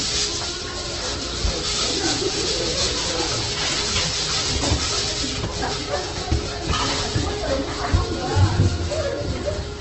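Opus compression, likely at a low bitrate near 12 kbps, runs through the whole recording: nothing survives above about 8.1 kHz, and the encoder fills starved bands with folded or noise-like energy, so the sounds come out rough, grainy and noisy rather than hollow.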